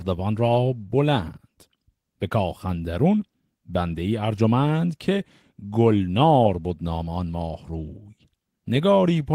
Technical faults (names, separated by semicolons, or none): none